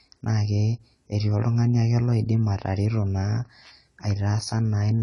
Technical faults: AAC compression

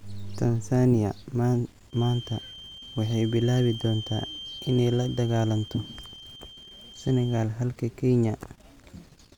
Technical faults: feedback whistle

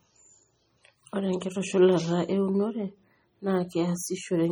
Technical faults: MP3 compression

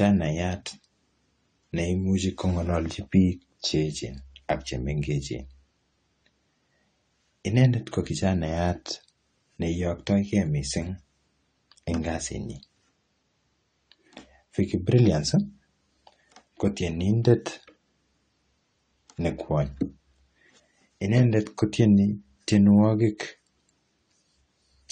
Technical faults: AAC compression

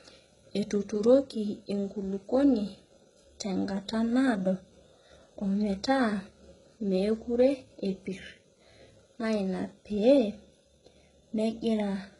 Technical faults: HE-AAC compression

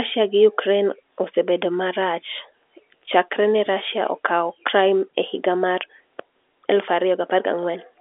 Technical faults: none

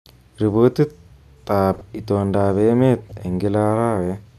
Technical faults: corrupt frame decoded

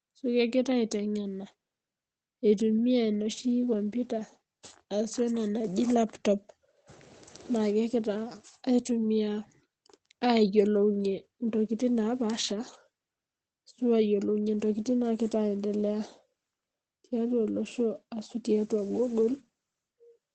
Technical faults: none

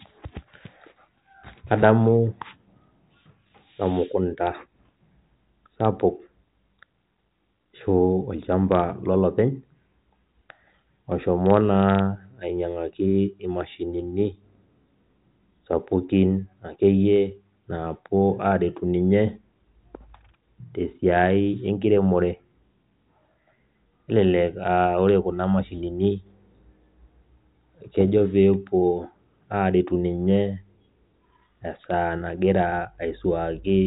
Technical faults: none

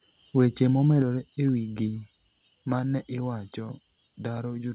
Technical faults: microphone overload; microphone volume stepped down

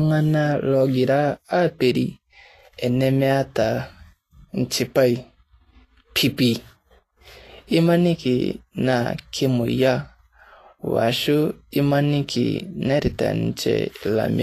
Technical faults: Vorbis compression

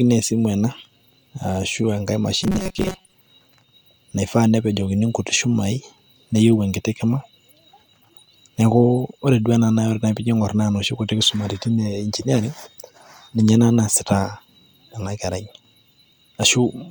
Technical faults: robotic sound from repeated short buffers

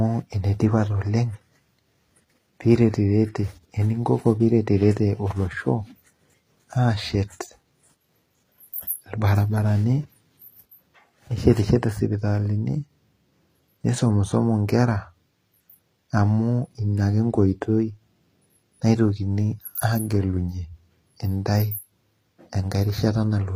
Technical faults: HE-AAC compression

